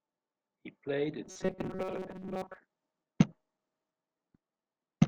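From 1.25 to 2.58 s the speech turns into robotic sound from repeated short buffers. It becomes a rigid, metallic buzz near 188 Hz. This likely comes from replaying a 5.3 ms slice for most of that stretch while fresh audio arrives too slowly.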